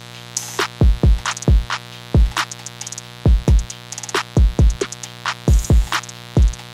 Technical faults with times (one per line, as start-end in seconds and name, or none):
0.00-6.74 mains buzz